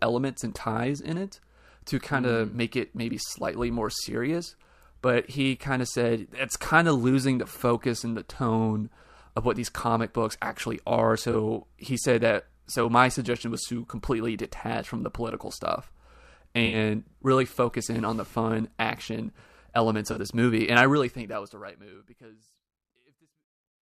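At 11.32 to 11.35 s, then 16.66 to 16.76 s and 20.10 to 20.19 s, the speech shows corrupt frame concealment: damaged AAC frames were detected by the decoder and replaced, by muting or by a scrambled repeat of the previous spectrum. The first is short enough to fit a single frame, the later two roughly three, and the clip then ends in a closing fade-out.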